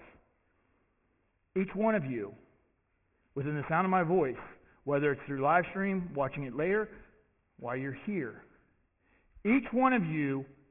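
Aliasing runs throughout the audio. Content above 3 kHz folds back as gritty, unrelated tones roughly twenty decibels down, consistent with downsampling to 6 kHz unfiltered. A spectrogram shows energy packed hard against 3 kHz.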